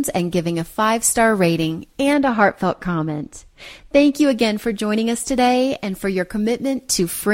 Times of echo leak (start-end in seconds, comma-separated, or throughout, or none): none